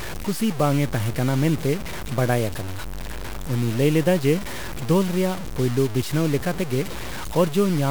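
From start to end, the speech carries a coarse, grainy distortion. It rides on every syllable and changes with the sound. Quiet passages turn gritty, and the softest tails break up or drop to silence. The error sits only about 15 dB below the signal. The likely cause is low bit depth without dither. The samples were truncated to very few steps, which fits roughly 4 bits, so the rounding error tracks the signal instead of becoming a steady hiss.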